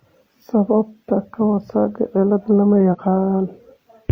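At 2.88 to 2.95 s the speech breaks up briefly from damaged data in the compressed stream. Corrupted bytes make the decoder misread frames and hunt for the next header. A spectrogram shows a short broadband smear, and the waveform an abrupt discontinuity.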